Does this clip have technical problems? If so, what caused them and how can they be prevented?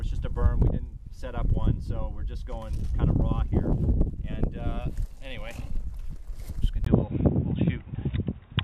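Yes. From 6.85 s to the end, the input likely switched to a poorer device: after a 20 ms gap, everything above 3.8 kHz vanishes and a quiet new noise floor appears. Lock the recording input to one device and disable automatic switching.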